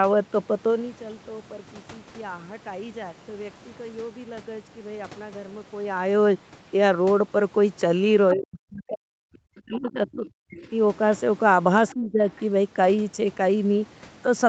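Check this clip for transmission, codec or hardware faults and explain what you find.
Two echo-control problems show up in the speech, both pointing to an echo canceller struggling with a loudspeaker on the talker's end.

Other side's voice leaking through: the echo canceller likely failed to remove all of the far-end voice that the loudspeaker fed back into the microphone. Brief scraps of a second voice slip through at 8.31 s, 11.88 s and from 12.29 to 12.45 s. They are faint, about 15 dB below the speech at first and then weaker, roughly 25 and 30 dB down, so they register as short, ghostly fragments.

Speech suppressed in double talk: when both sides talked at once, the canceller likely could not separate its own talker from the echo and turned everything down. From 8.34 to 10.71 s the voice sinks sharply, dropping by as much as around 40 dB for about two seconds in all, and sounds swallowed or cut into pieces. 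A milder dip of around 15 dB follows from 11.94 to 12.2 s, briefly thinning the speech. Both dips come right after leaked fragments, and through the Opus call path the sound stays limited to 8 kHz.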